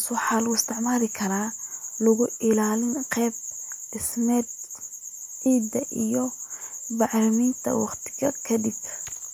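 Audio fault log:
throughout: USB whine. A fixed-pitch tone sits under the speech for the whole clip, built on a 1 kHz fundamental with a ladder of multiples, the strongest near 17 kHz and so heard mainly as a thin, high-pitched whine. The bus pulls current in 1 ms frames, and that periodic draw leaks onto the power or ground of the audio path, leaving a steady tone roughly 40 dB below the speech.
5.22 s and 6.84 s: dropped samples. Each moment has a single sharp click, the first just before "ciidda iyo" and the second on its own. The likely cause is that about one sample went missing from the stream, so the waveform jumps straight from one value to a later one. That gap is far too brief to remove any sound. The sudden step is heard as a tick and would show as a thin vertical line on a spectrogram.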